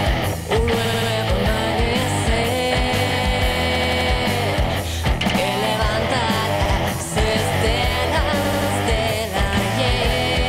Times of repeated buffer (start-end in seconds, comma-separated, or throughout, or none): 0.85-1.11, 3.75-4.10, 5.29-5.38, 8.45-8.70